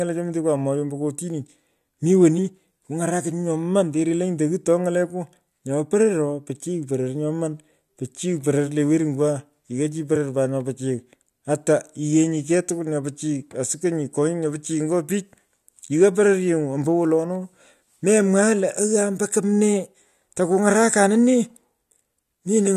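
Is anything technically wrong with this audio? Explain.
Yes. Compressed frames were skipped twice in this speech clip, at 2.37 s and 10.15 s. Each time the decoder did not play one compressed frame, either because it was missing from the file or because it was rejected as damaged. The audio therefore jumps ahead by about 20 ms, consistent with a frame length of 23.2 ms. Each jump cuts a short piece out of the speech, so the audio skips abruptly forward at that point.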